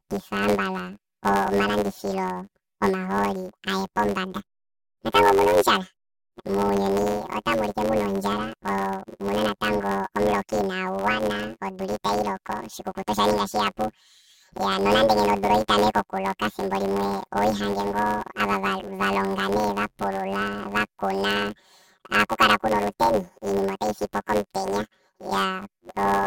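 From start to finish, the speech carries a planar-read-as-interleaved fault. The stereo data arrives in blocks of all left samples followed by all right samples, but it is played back as if the channels alternated sample by sample. Each 10.67 ms block, which fits a 512-sample buffer, therefore plays twice at double speed. With blocks this short there is no clear octave jump. The result is a robotic buzz at about 93.8 Hz, the block rate, laid over the speech.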